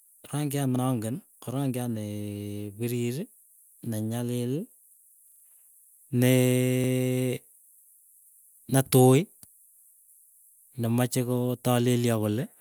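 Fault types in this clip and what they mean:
Repeated buffer: at 0.76 s, 5.28 to 5.44 s and 6.84 s, new audio failed to reach the playback device in time, so it replayed the last 40 ms block it already held. The first and last events repeat that block once, giving a brief stutter with a hard join. At 5.28 s it plays four extra times, producing a longer stutter. Nothing is skipped, so the speech picks up again where it stopped.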